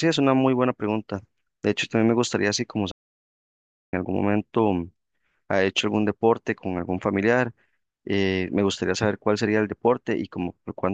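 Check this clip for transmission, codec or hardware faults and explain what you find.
One fault is present: a playback stall. At 2.91 s the speech stops dead and the output stays silent until 3.93 s, a gap of about one second. It then resumes. The likely cause is the player running short of data, or its playback thread being blocked, so nothing reached the output until it recovered. The break does not sound like a natural pause. The sound is cut off mid-flow, then simply picks up again.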